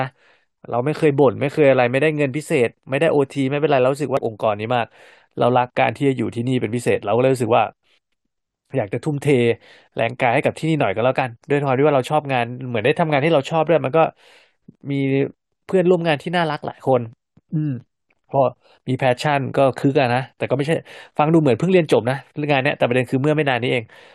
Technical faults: damaged data in a compressed stream

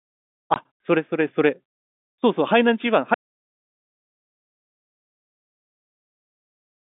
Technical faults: packet loss filled with silence; audio dropout to silence

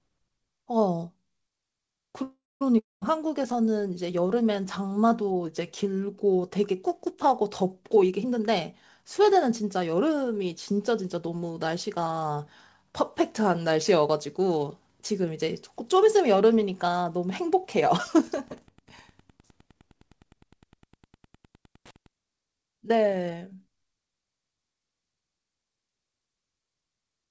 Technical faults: call audio freeze; long network dropout; jitter buffer speed-up; Wi-Fi interference

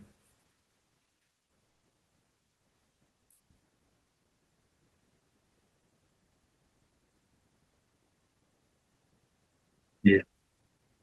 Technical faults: burst of packet loss

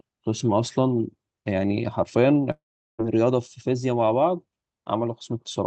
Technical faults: long network dropout

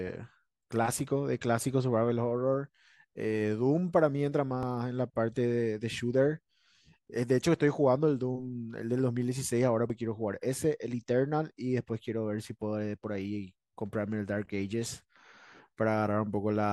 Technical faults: dropped buffer (overrun)

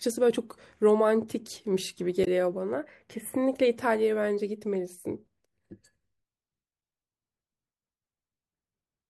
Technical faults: damaged data in a compressed stream

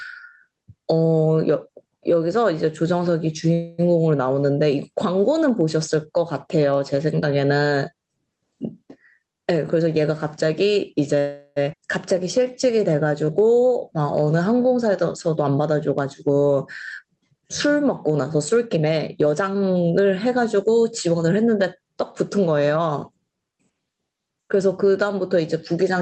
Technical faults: gain pumping; call audio freeze; jitter buffer speed-up; skip ahead; jitter buffer slow-down

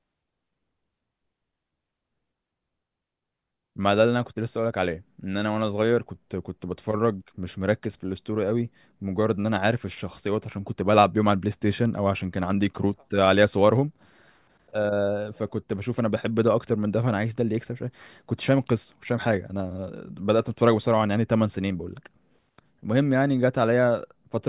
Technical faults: none

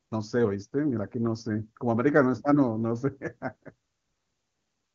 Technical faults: none

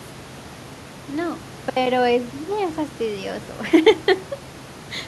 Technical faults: none

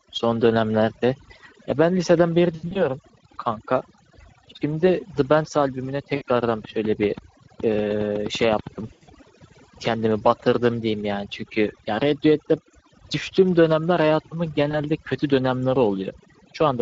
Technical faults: overdone noise removal; Speex codec; VoIP packet loss concealed by the speech codec; train of clicks

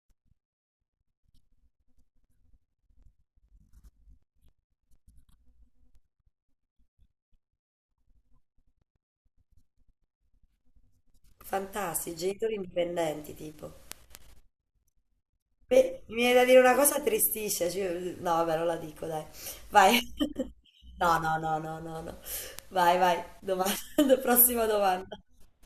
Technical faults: word clock ticks

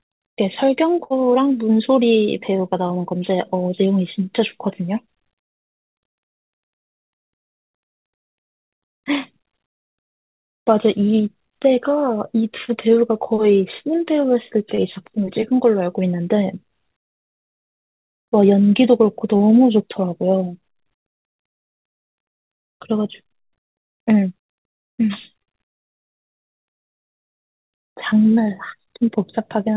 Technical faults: burst of packet loss; short concealed packet loss

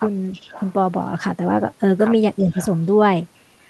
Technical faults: echo leak; speech suppressed in double talk

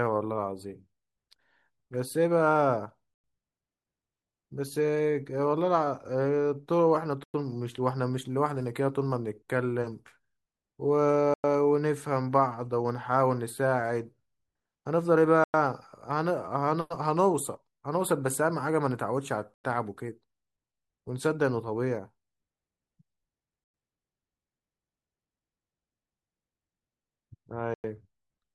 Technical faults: gap between chunks

